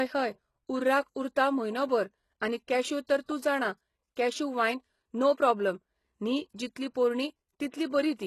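Throughout the speech, the treble sounds gritty and metallic, with s sounds turning lispy and nothing above 12.3 kHz. The likely cause is heavy HE-AAC compression, with the upper band rebuilt by copying lower bands, which fits a very low bitrate around 16 kbps.

From 3.24 to 3.29 s, a brief hiss creeps in ahead of an attack, which then sounds softened and smeared. This is pre-echo: quantisation noise, spread across the whole transform block, leaks about 48 ms into the quiet before the onset.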